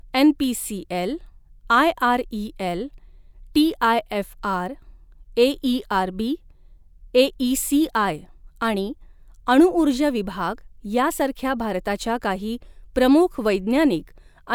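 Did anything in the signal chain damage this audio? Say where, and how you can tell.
No, nothing in the signal chain audibly damaged this speech recording. No stage, from the wiring through to playback, leaves any trace that can be heard.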